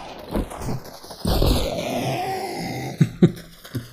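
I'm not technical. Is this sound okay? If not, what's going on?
No. Throughout, the two channels are drifting apart: each side was timed by a slightly different clock, so one slips steadily behind, reaching under a millisecond by the end. Unlike a fixed offset, this creeps, so played together it sounds like slow, sweeping flanging.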